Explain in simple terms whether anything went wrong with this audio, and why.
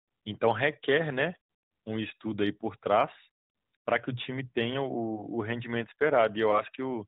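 Nothing went wrong here; this speech has the narrow, phone-call sound of the AMR narrowband mobile codec, which is simply how mobile calls are carried, and nothing in it points to a problem.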